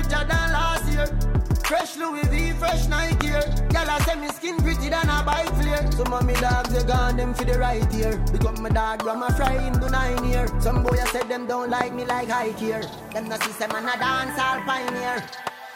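A loud pop hits at 3.21, 5.33, 9.47, 10.89 and 11.81 s. Each is one sharp crack, around 20 dB above the sound. The one at 5.33 s is softer, nearer 15 dB. A voltage spike, likely from a switch or static, caused them. The sound continues underneath.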